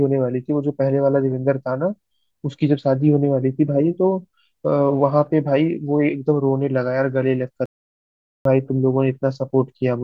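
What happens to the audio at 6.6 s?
Nothing goes wrong at 6.6 s: the speech continues intact through that moment, with no dropout, click or distortion.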